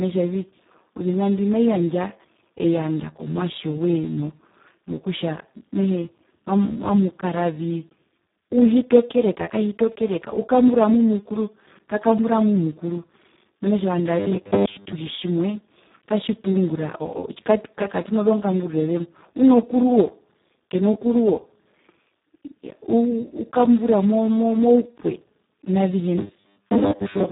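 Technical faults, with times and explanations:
Throughout, Speex codec: heavy low-bitrate coding, which fits around 4 kbps, leaves speech hoarse and noisy with nothing above 3.8 kHz.
14.20–14.95 s and 26.18–27.31 s, robotic sound from repeated short buffers: a rigid 100 Hz metallic buzz, likely from re-playing 10 ms buffers covering most of the audio.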